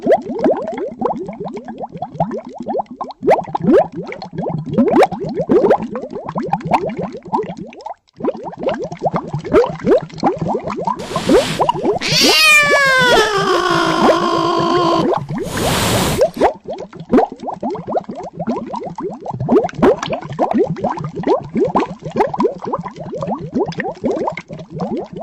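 No technical faults are audible anywhere in the recording.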